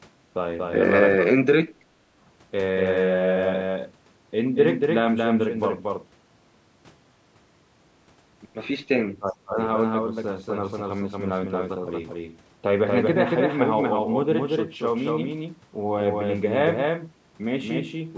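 A doubled audio track runs through the whole clip: a second full-band copy of the speech trails the original by roughly 200 ms at about 5 dB quieter, with no decay or room colour. It most likely comes from a second, slower capture path or an out-of-step edit.

Speech suppressed in double talk occurs from 1.15 to 1.32 s and again from 9.19 to 9.58 s. The voice sinks by roughly 30 dB. The echo canceller likely could not separate this talker from loudspeaker echo while both sides spoke, so it turned both down.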